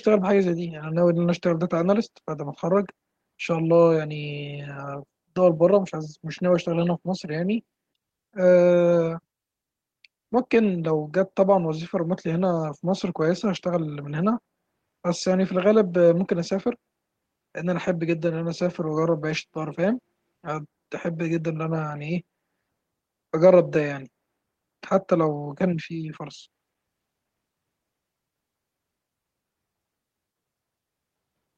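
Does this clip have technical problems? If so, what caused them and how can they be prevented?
No, there are no technical problems to hear in this speech clip. With no fault present, there is nothing here that calls for a cause or a fix.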